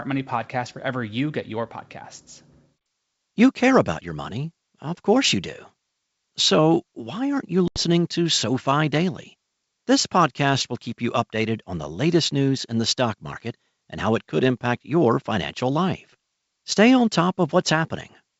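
At 7.68 s, just after "why aren't you", the G.722 wideband call suffers packet loss on an ADPCM call: about 80 ms of audio, roughly four packets, drops out and is filled with hard-edged silence lasting until 7.81 s. What separates this from a plain dropout is the recovery. The decoder's adaptive predictor and step size have lost track of the sender's, so the sound resumes with brief, slight distortion.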